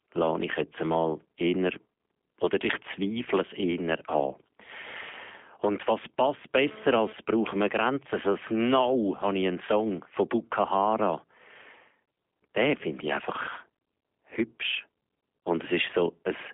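From start to finish the speech carries the sound of the G.729 codec, here the G.729A variant at 8 kbit/s. The voice is rebuilt from a vocal tract filter, a pitch predictor and a few pulses per frame. The original waveform is not kept. Nothing above 3.6 kHz survives, and the line band runs from 250 Hz to 3.5 kHz. The damage is plainly audible. Voices sound rough, buzzy and faintly synthetic, with dull, clipped sibilants.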